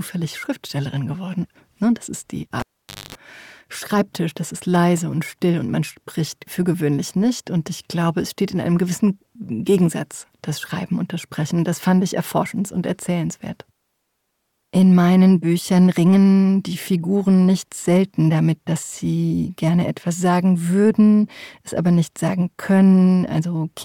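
At 2.60 s a live cable is pulled and plugged in again, and the disconnection lasts until 3.15 s. A pop marks the moment the plug leaves the socket, and the signal then drops to near silence for about 505 ms. Before the sound comes back, a roughly 239 ms burst of 50 Hz mains buzz intrudes while only the tip makes contact and the ground is still open. A second pop follows as the connection seats fully and the sound returns.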